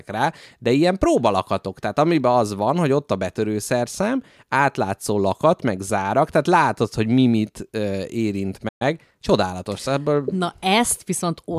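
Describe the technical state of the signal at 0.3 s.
At 0.3 s the speech signal is intact, with no audible fault at that moment.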